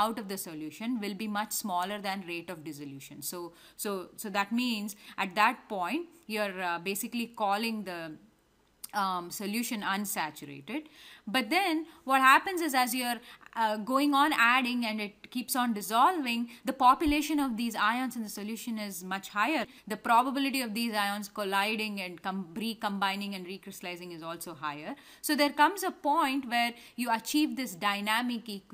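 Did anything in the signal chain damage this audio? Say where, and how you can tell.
No, nothing in the signal chain damaged this audio.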